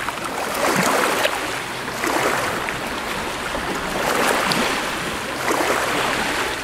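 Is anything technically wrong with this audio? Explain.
Yes. At 6.24 s there are lost LE Audio frames: about 10 ms is missing, which fits a single lost frame. The decoder patches the gap with the previous spectrum under randomised phase, so the sound briefly becomes a noisy smear rather than the silent gap of a plain dropout.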